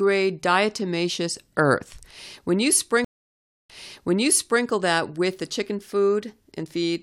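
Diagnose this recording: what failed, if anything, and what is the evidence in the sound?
Network stage, stream reconnect: speech goes silent for 0.63 s from 3.05 s, then resumes 0.97 s earlier at "that with the chicken", unlike a simple dropout, which never repeats audio.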